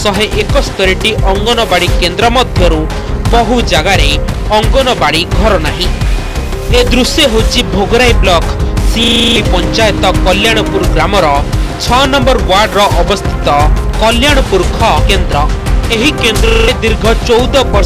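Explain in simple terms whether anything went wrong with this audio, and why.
Hard clipping runs through the whole clip. The sound is pushed past what the recording can hold, so loud moments get their tops sliced flat and turn harsh and fuzzy. Unlike a brief crackle, it hits every loud sound.

There is also a system hang loop, twice. The computer froze while the sound hardware kept replaying one tiny 40 ms slice, producing a buzzy rattle about 25 times a second. This happens from 9.04 to 9.36 s, losing about a third of a second, and from 16.48 to 16.68 s, losing about a fifth. An identical repeating buzz, rather than silence or a skip, is what marks it.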